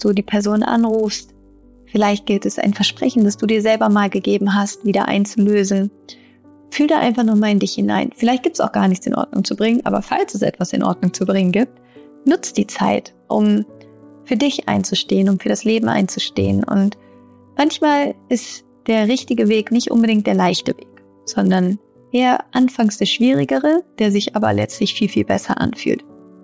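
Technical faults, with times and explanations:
Throughout: resampler restarted on every block. Each 10 ms block was converted on its own, so its edges lacked the true neighbouring samples. The small error at every boundary repeats at 100 Hz, heard as a buzz riding on the sound, consistent with a 24 kHz to 16 kHz conversion.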